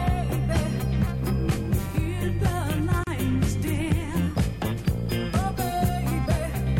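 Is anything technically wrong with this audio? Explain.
Yes, there is a gap at a join of encoded pieces from 3.04 to 3.07 s: a gap of about 34 ms cut into continuous sound. Separately encoded segments were joined without trimming the encoder's leading delay and final-frame padding. It sounds like a brief dropout, after which the sound resumes where it stopped. On a waveform it is a flat stretch with smeared edges; on a spectrogram, a narrow empty vertical band across all frequencies.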